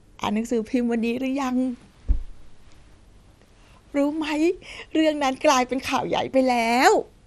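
A speech recording with MP2 compression damage running through its whole length: the sound is dull and carries a gurgling, granular roughness, likely from MPEG Layer II coding at a rate around 80 kbps. With too few bits, upper sub-bands drop out and the rest are coarsely quantised. A spectrogram would show nothing above 14.1 kHz and blocky, flickering patches in the higher bands, while the waveform itself looks unremarkable.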